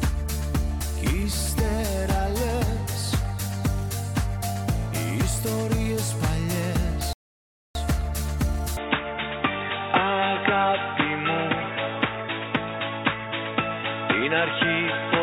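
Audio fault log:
7.13 to 7.75 s, rebuffering stall: The sound drops to silence for about 0.62 s, then picks up exactly where it stopped. Nothing is missing. The player ran out of downloaded audio and waited for more, so time is added.
8.77 s to the end, input switched to a poorer device: From 8.77 s the sound turns dull and boxy, with nothing above 3.8 kHz. There is no gap at the change and no clear level jump. A faint new noise floor sits about 50 dB below. A change to a narrower-band input is the likely cause.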